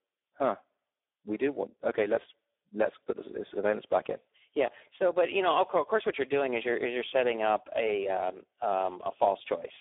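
From start to finish the speech carries heavy Speex codec damage. The sound sits in a narrow line band of about 300 Hz to 3.6 kHz, with nothing above 3.8 kHz, and the coarseness fits a low setting near 8 kbps. With so few bits for the CELP excitation, the speech comes out noisy and hoarse.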